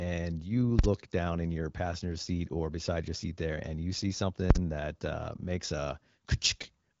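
At 0.79 s and again at 4.51 s there's invalid numbers at full scale: a calculation blew up, pinning the output flat at maximum for about 46 ms, which fits a 2048-sample block, so each lands as a hard bang.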